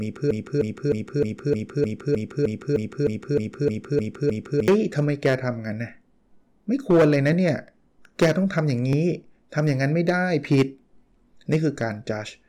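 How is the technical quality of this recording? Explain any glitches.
The quality is poor, with two faults. From the start to 4.68 s, a broken-record loop repeats a 0.31 s fragment back to back 14 times. A stalled player or stream likely resent its last fragment, so the audio for that span is lost. Hard clipping runs throughout. The speech is driven about 10 dB past the limit, so a small share of peaks are cut flat and crackle harshly.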